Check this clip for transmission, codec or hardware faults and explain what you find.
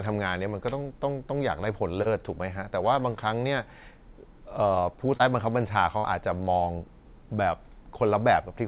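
Four packet-loss faults affect this speech, heard against a narrowband call path with nothing above 4 kHz, which fits a G.711 mu-law link at 64 kbps.

Short concealed packet loss occurs at 0.83, 2.02 and 5.17 s, each about 0.05 s long. Each one sounds like a brief smear or wobble in the voice. About 30 ms of audio failed to arrive in time, and the receiver patched the gap with roughly 22 to 28 ms of sound extrapolated from what came before. It then blended back into the real signal.

A burst of packet loss runs from 5.98 to 6.07 s. Here the voice stalls into a held, fading buzz or hiss, then resumes slightly further along. About 60 ms went missing in a row. The receiver filled the gap by stretching the last sound and turning it down, so that stretch of speech is simply gone.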